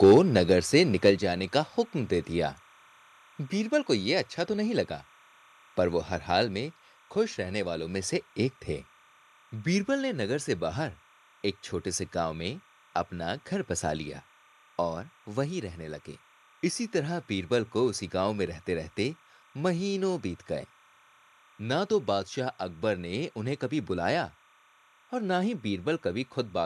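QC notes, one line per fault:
Throughout: timecode bleed. A steady chirping warble sits about 30 dB under the speech and flips between pitches near 1 and 2 kHz at a 30-frames-per-second rhythm, which points to linear timecode leaking in from a neighbouring track or cable. Unlike mains hum or a single whistle, it keeps alternating between two pitches and never changes with the speech.
0.03–0.18 s and 1.07–1.10 s: microphone overload. The loudest peaks take on a harsh, crackling edge, running about 4 dB over full scale in the first burst, where roughly a tenth of samples are flattened, and about 2 dB over in the second. The likely cause is input gain set too high, so the converter cuts off the waveform tops. Call-codec roughness spreads across the whole signal, but this crackle stays on the peaks alone.
0.12 s and 1.11 s: microphone volume stepped down. Speech and background both drop together in a single step, by about 2 dB and then about 4 dB. 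Each drop comes right inside or just after a clipped burst, which fits software lowering the device input level in response. A compressor or gradual AGC would ride the level smoothly, but here the level falls instantly and stays at the new setting.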